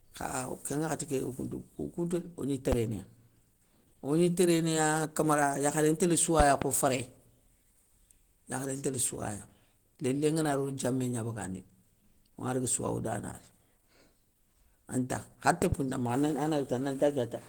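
Throughout this speech clip the sound has a grainy, rough, hoarse texture, with plainly audible coding damage even though the bandwidth reaches almost the full range, up to about 20.1 kHz. That points to Opus compression at a low rate, around 16 kbps, with the encoder likely in its hybrid mode. At that rate it keeps each band's energy but fills starved bands with folded or noise-like content, so tones come out noisy rather than clean. Sharp loud pops also cut through the audio three times, each peaking at about 15 dB above the surrounding signal while the speech continues underneath. There is a single pop from 2.72 to 2.75 s, a pair of pops in quick succession between 6.40 and 6.64 s, and another pair between 15.62 and 15.75 s. These are likely sudden voltage steps or pulses, from a plug, a switch, static or a driver glitch, added to the signal and shaped by the circuitry after them into short bursts.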